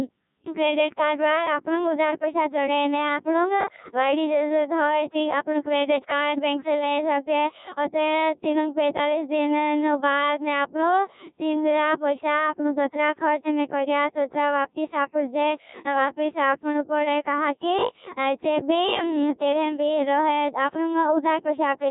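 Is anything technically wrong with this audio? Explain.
Yes, the speech is heavily degraded by the Codec 2 vocoder for its entire length. Only pitch, voicing, energy and a spectral envelope survive, and the voice is rebuilt from sine waves, which fits a very low rate of about 1.6 kbit/s. It sounds robotic and buzzy. A spectrogram shows smeared, stepped harmonics with no fine noise detail, and the waveform bears no sample-level resemblance to natural speech.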